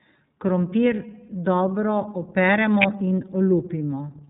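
From start to finish the speech passes through the iLBC codec, and the damage is plainly audible. Everything above 4 kHz is gone, so the sound is narrowband and dull, and it has a slightly rough, synthetic edge. The roughness comes from the codec rebuilding the excitation of each 30 ms frame independently, which points to its 13.33 kbps mode. Unlike a simple low-pass filter, iLBC adds a grainy texture as well as losing the top end.

At 2.82 to 2.84 s a sharp snap lasting about 20 ms sits on top of the speech. It is most likely an electrical switching spike, an arc from a nearby switch, motor or static discharge that was picked up on the audio line. A dropout or codec glitch interrupts the signal, but this is added over the speech, which carries on unbroken underneath.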